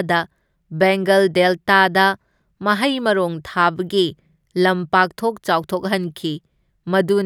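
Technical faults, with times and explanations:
Nothing stood out on listening to this speech recording.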